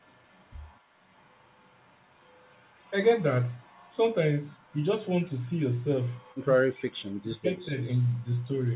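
In this speech recording, the far end's echo canceller likely let part of its loudspeaker signal back into the microphone path, producing an echo leak. A faint delayed copy of the talker returns 230 ms late, first from 6.23 to 6.41 s at roughly 40 dB below the speech, then from 7.91 to 8.03 s at roughly 30 dB below, where the brief ghostly repeat is easier to catch. Between those moments, the canceller likely mistook the talker for echo while both sides spoke at once, so the audio shows speech suppressed in double talk from 6.68 to 7.77 s. It ducked the voice by as much as about 40 dB, for around 0.7 s in total, so the speech fades and drops out in pieces through that stretch. All of this sits inside G.711 mu-law telephone-band audio, with nothing above 4 kHz.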